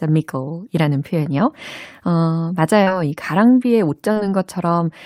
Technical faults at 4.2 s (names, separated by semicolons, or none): short concealed packet loss